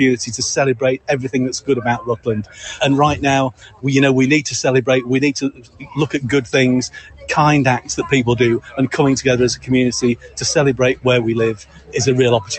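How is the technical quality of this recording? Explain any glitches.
The quality is poor because a speech noise suppressor stays active on non-speech material for the whole clip. It also cuts deep into specific passages. The call path adds its own ceiling, as nothing is heard above about 8 kHz. That limit fits a wideband Opus link at around 32 kbps.

The first fault is the noise suppressor applied to music or sounds, and it runs from start to end. A suppressor tuned for voices treats steady tones, ambience and reverb as noise. It keeps pushing them down and letting them back up. The gain swings by about 15 dB. Attacks get through, but held parts and tails sag. The result is pumping and a thin, fluttering texture.

The second fault is sound cut by the noise suppressor, in four stretches: 0.22 to 3.85 s, 5.48 to 8.78 s, 9.55 to 10.39 s, and 10.94 to 12.52 s. In each stretch the suppressor judged part of the sound to be noise. 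It pulled that part down harder than the rest. The deepest drops reach about 17 dB in the first two stretches, about 14 dB in the third, and about 16 dB in the last. Sustained and decaying material sinks or ends early. Sudden events stay mostly intact.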